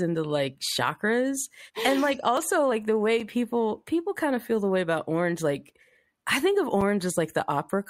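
Right at 2.37 s, between "like chakras and like" and "like the way people", there's an overlap between stream segments. Two chunks of the speech stream claimed the same stretch of time, so the player trimmed the overlap even though that bit wasn't actually duplicated. About 15 ms of real audio just disappears, and the waveform jumps across the gap, so you get a small click or a tiny skip.

Then there are two blocks of digital silence, each 5 ms long. The first is at 3.20 s, after "like the way" and before "people people kind of". The second is at 6.81 s, just after "like I think of". In both cases a run of samples came out as silence, likely because the output buffer wasn't filled in time. The signal drops straight to nothing and comes straight back with no fade, and at that length each one is heard as a tick or dip.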